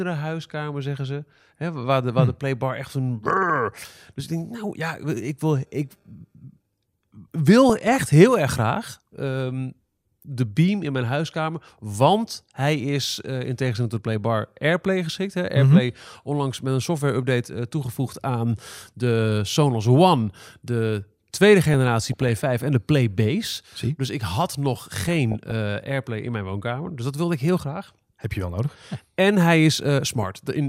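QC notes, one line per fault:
7.69–7.96 s (just before "heel erg graag"), 11.58–11.74 s (after "de beam in mijn"), 21.74–22.44 s, 25.05–25.52 s (after "ik had nog"), 30.23–30.39 s: DAB burbling. Speech gets short blips of noise in single sub-bands. Weak reception lets bit errors past correction, corrupting MP2 samples and scale factors, which fits a bit error rate of about 0.3 to 0.5 percent.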